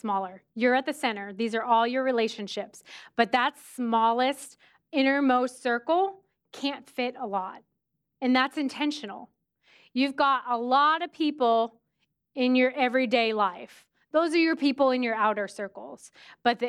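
Speech, with nothing technically wrong to report at any point.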